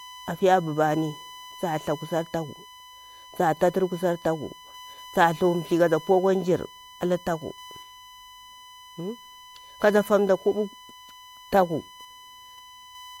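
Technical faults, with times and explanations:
Throughout, USB whine: a steady, fixed-pitch tone at 1 kHz sits under the speech, roughly 25 dB below it. The USB bus draws current in 1 ms frames, and that ripple leaks in through power or ground. Mains hum would sit at 50 or 60 Hz and its harmonics instead.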